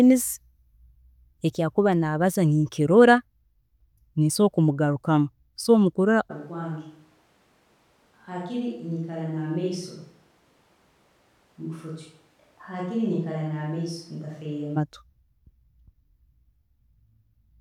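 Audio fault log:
6.32–14.75 s, switch to a distant microphone: speech turns suddenly roomy, thin and about 10 dB quieter, likely because a farther microphone replaced the close one.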